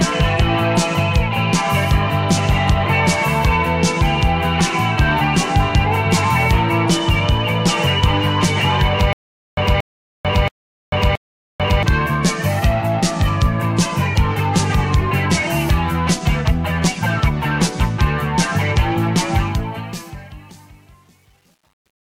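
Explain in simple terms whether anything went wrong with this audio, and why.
Stutter with silent gaps, from 9.13 to 11.83 s: a 0.23-second burst of sound plays, then about 0.44 s of dead silence, repeating four times at an even pace. The playback likely stalled and kept replaying its last scrap, so the audio meant for those seconds is gone.

Truncation distortion on a fade, from 19.35 s to the end at 22.18 s: as the sound fades out, it turns gritty, worst from 20.04 s onward. The volume stage kept too little detail, which fits about 9-bit resolution, so quiet levels collapse into coarse steps.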